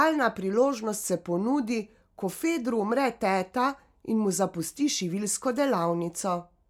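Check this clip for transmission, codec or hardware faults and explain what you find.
Nothing turns up here to flag, and the speech comes through steady and intact from the first moment to the last.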